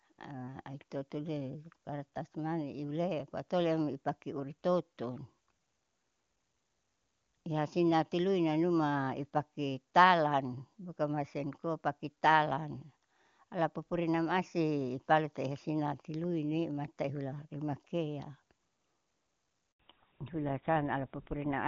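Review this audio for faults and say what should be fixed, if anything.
A handover gap runs from 19.72 to 19.79 s: for 80 ms no speech frames arrive while the call switches networks, so the sound collapses to silence, a flat line in the waveform and a blank vertical strip across the spectrogram. Handover timing should be tuned to avoid it.

Fallback to narrowband follows from 19.79 s to the end. The call drops from HD Voice, which fits AMR-WB at 23.85 kbit/s, to what sounds like GSM full rate. On the spectrogram everything above 4 kHz is cut off abruptly, leaving speech duller and rougher. The network should keep wideband codecs negotiated across handovers.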